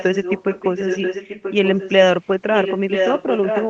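From 0 to 1.91 s, a copy of the speech returns about 0.98 s late, nearly as loud as the original. This echo leak is likely a loudspeaker echo canceller letting sound through. A faint scrap follows at 2.25 to 2.29 s. Strong echo returns from 2.51 s to the end.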